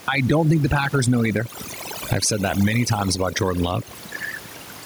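From start to finish there's overdone noise removal: the denoiser is clamping individual frequency bands whenever they get near its noise estimate, so the quiet bits of speech get cut along with the background noise. You hear the background drop away and break up into little twinkly specks.

Also running the whole way through is gain pumping. The gain swings by around 10 dB, so the level sounds squashed and loud and soft parts sit close together. The likely cause is input gain set far too hot, with a fast limiter or compressor hauling it back on every peak. The room noise sits about 32 dB below the speech.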